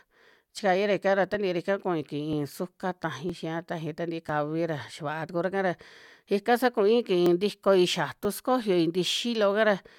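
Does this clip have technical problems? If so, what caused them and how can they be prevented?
Yes. There is an overlap between stream segments, heard as tiny skips at 1.34, 2.33, 3.30, 4.29, 5.29, 6.28, 7.26 and 8.25 s. They come about once per second, matching one-second segments. Adjacent segments' time stamps overlap, so the player trims 5 to 18 milliseconds of genuine speech, and the waveform jumps. Prevention: make segment time stamps contiguous, so each segment starts exactly where the previous one ends.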